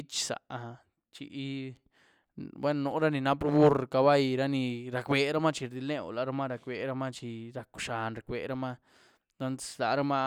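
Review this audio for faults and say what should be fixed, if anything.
Nothing needs fixing: the speech signal holds steady throughout, with no audible technical faults at any point.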